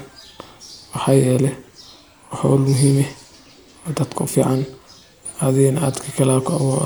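Listening to this speech recording, nothing stood out as a technical problem at any point.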